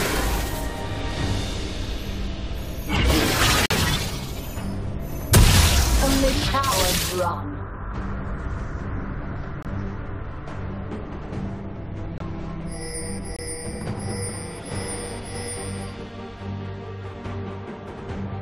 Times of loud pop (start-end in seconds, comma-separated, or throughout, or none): none